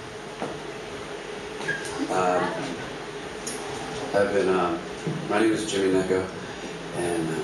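No technical faults can be heard anywhere in the audio; the signal stays continuous and steady throughout.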